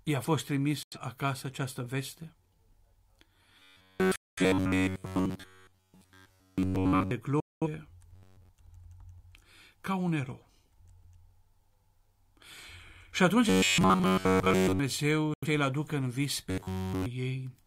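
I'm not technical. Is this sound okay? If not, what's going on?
No, there are two kinds of trouble in this speech.

The first is a digital broadcast dropout, and it happens four times: 0.83 to 0.97 s, 4.16 to 4.42 s, 7.40 to 7.67 s, and 15.34 to 15.47 s. The receiver lost the signal for a moment and simply went quiet until good data came back. The sound snaps off almost instantly and leaves a hole, a short one of about a tenth of a second or a longer one of about a fifth. Whatever was said in those gaps is gone for good. The first gap lands right before "acasă această veste", and the last right before "aducă în vis".

The second is robotic sound from repeated short buffers. It shows up from 3.59 to 7.11 s, 8.13 to 8.49 s, 13.49 to 14.79 s, and 16.50 to 17.06 s, just after "aducă în vis". The voice turns into a stiff, metallic buzz pitched at about 94 Hz. It still roughly follows the speech, but it sounds mechanical. 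The likely cause is that fresh audio wasn't arriving fast enough, so the playback kept looping the last tiny slice, roughly 11 ms, instead of playing what was really said. At 13.49 to 14.79 s the looping is a bit lighter, so some real speech still gets through.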